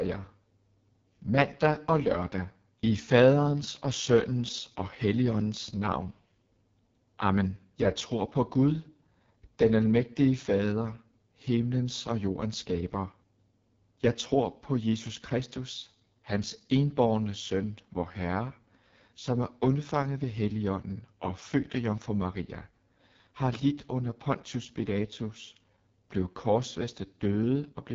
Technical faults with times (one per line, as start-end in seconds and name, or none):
0.00-27.95 AMR wideband (HD Voice) codec